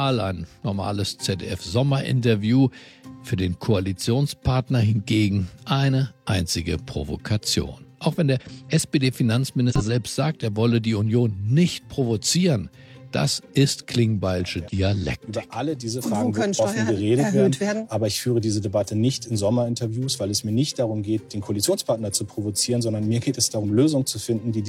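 Compressed frames skipped: whole frames were lost or rejected as damaged by the decoder, so the audio jumps ahead, by roughly a tenth of a second at 8.36 s, about 150 ms at 9.66 s, and around 50 ms at 14.59, 15.93 and 23.60 s.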